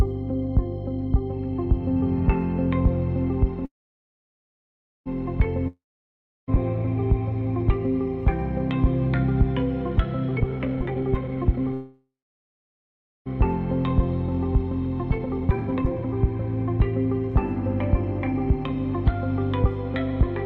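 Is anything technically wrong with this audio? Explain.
Yes, there are a few network-style glitches in this one.

There are two call audio freezes, from 3.65 to 5.08 s and from 11.74 to 13.28 s. The sound hangs as a fading buzz and then drops to near-silence, for about 1.36 s in the first and about 1.14 s in the second. When it resumes, it picks up exactly where it left off, so nothing is lost; the audio just ends up about 1.4 s and 1.5 s later. This is likely the jitter buffer running dry while packets were held up in transit.

Between 5.68 and 6.56 s there's a long network dropout. The last sound trails off as a fading hiss, then there's roughly 0.68 s of silence, and the audio comes back further along. About 0.8 s of material is simply gone, so after the pause the audio jumps ahead. The cause is likely a stretch of packets that never arrived.

There are two jitter buffer speed-ups, from 10.28 to 11.73 s at 165% speed and from 15.03 to 16.26 s at 148%. 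The receiver was holding too much audio, so it clipped out short pitch-period-sized chunks over and over. The pitch stays the same but things sound noticeably rushed. Roughly a second is cut from the first speed-up and around 0.7 s from the second.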